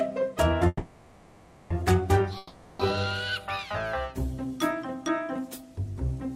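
At 0.67 s the sound stalls and turns into a fading buzz, lasting until 1.73 s. This is a call audio freeze. Packets were likely held up and the jitter buffer ran empty. The audio resumes where it stopped, about 1 s late, with nothing lost.

From 2.37 s to 2.82 s there is a long network dropout. The last sound again trails off as a decaying buzz. No audio likely arrived for this stretch. When sound returns, roughly 420 ms of it is missing.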